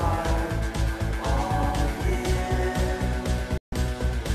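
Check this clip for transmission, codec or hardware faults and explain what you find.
One transmission fault: a digital broadcast dropout from 3.58 to 3.73 s. The receiver stopped getting valid frames and muted until clean data resumed. The sound fades out over about 3 ms, leaving roughly 144 ms of silence, which fits around six lost frames. The missing audio never returns.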